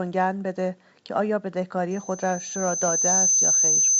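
At 1.91 s a loudspeaker feedback squeal begins: a single tone at 6.2 kHz that swells steadily over about a second and a half and holds to the end of the clip, finishing roughly 5 dB above the speech. The microphone is hearing the loudspeaker it drives, and at 6.2 kHz the loop gain has crept past unity, so that one frequency keeps reinforcing itself on every pass instead of dying away.

At 2.88 s, while the squeal is still building, there is a short rough pop lasting under 10 ms. These are bit errors on an ADPCM link. A few flipped bits throw off the decoder's step size and predictor, so the damage rings on briefly rather than staying a single-sample click, and the level lurches for a moment. The spread points to a few consecutive frames being hit. The G.722 coding carrying the call, which sounds like a full-rate 64 kbit/s link, contributes little audible damage of its own.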